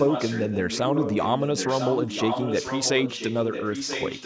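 Echo leak runs through the whole clip, from 0.00 to 4.25 s: speech comes back as a second copy about 0.99 s later, only a few decibels quieter than the original. The likely cause is a far-end loudspeaker whose echo canceller failed to subtract what its microphone picked up and sent that delayed sound back down the call. The call's microphone processing band-limits the audio to nothing above 8 kHz.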